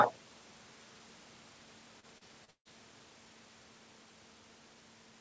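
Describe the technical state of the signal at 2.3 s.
Repeated packet loss (robotic sound) covers 2.3 s, running from 2.00 to 2.68 s. Four separate dropouts, the longest 146 ms, are each patched by stretching the last received sound, so 34% of that span is concealed, making the speech choppy and robotic.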